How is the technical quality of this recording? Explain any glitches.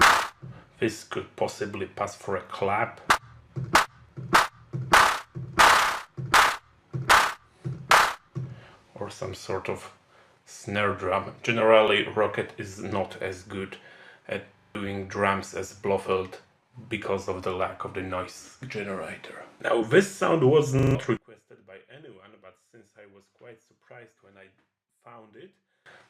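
The recording has three kinds of technical fault: brief skips early on, two stutters in the middle, and a long stretch near the end where the level collapses.

Overlap between stream segments occurs at 3.10, 4.09, 7.05 and 8.04 s. At each point roughly 5 to 7 ms of audio is missing and the waveform jumps, heard as a tiny skip. The spacing in roughly whole seconds fits a stream delivered in one-second segments whose time stamps overlapped. The player trimmed the overlap even though that audio had not actually been duplicated.

A repeated buffer is heard at 14.59 to 14.75 s and again at 20.79 to 20.95 s. Each time, a 40 ms piece of audio plays four extra times, with a hard join at every repeat, producing a short stutter. New audio did not reach the output device in time, so it replayed its last buffer. Roughly 150 ms of the actual audio is lost at each event.

From 21.17 to 25.86 s the level drops by about 27 dB, leaving only a weak residue of the sound. 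The likely cause is one channel inverted: a stereo source with one channel's polarity reversed, summed to mono. Whatever both channels shared cancels out, and only the difference between them remains audible.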